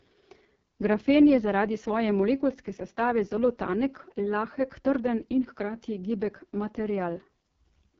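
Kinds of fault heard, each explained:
AMR wideband (HD Voice) codec: The speech is rough and raspy from start to finish, a buzzy, gritty texture typical of this codec's model-based coding at its lowest rate, and the heavy damage fits the 6.6 kbit/s mode. Unlike narrowband phone audio, which stops near 3.4 kHz, the bandwidth here reaches about 7.3 kHz, with a thin hiss-like top band of synthetic noise, so the harshness comes from coarse coding, not from a missing upper range.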